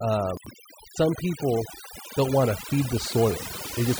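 Overdone noise removal runs through the whole speech clip. The noise reduction was set so strong that individual frequency bands near its noise estimate are pushed almost to nothing, and the quieter parts of the voice go with them. The background drops to near silence dotted with twinkling specks. On a spectrogram the gaps between words look scrubbed dark, scattered with isolated bright pixels, and the harmonics break up into patchy islands.

From 0.37 to 0.51 s, just before "some people don't want", there are chunks out of order. A segment about 46 ms long was delivered or written two chunks late, so it plays after material that should have followed it. Nothing is missing, but the sequence is scrambled, giving a brief jumbled stutter with three hard joins. In the waveform, three abrupt discontinuities appear across that span. On the spectrogram, thin vertical lines mark each join, and the formant tracks jump back and forth instead of flowing smoothly.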